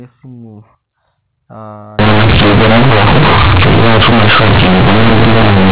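From 1.99 s to the end, the decoder treats the A-law bytes as plain linear 8-bit samples and never expands them: companded audio read as linear. Up to that point the speech carries the narrow, sub-4 kHz band of ordinary G.711 A-law telephone coding. Once the fault begins, every small sign change throws the waveform across roughly half its range, so quiet passages come out as loud as peaks. The speech turns into harsh, buzzy, heavily distorted noise, and the pauses fill with loud hiss.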